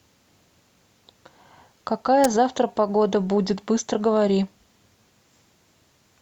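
At 2.24 s a sharp snap cuts across the speech, an electrical switching spike that likely came from a nearby switch or static discharge arcing into the audio line. On the waveform it is a needle-thin burst reaching roughly -5 dBFS; the spectrogram shows a bright vertical stripe spanning all frequencies.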